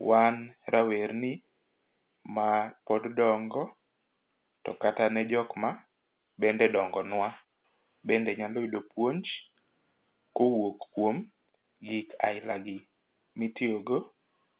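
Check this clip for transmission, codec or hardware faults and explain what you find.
No transmission, codec or hardware faults turn up in this clip.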